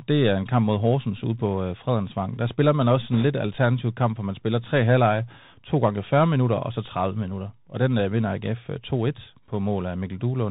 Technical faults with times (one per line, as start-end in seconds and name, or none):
0.00-10.51 Bluetooth CVSD headset codec
3.14-3.25 bit errors on a Bluetooth voice link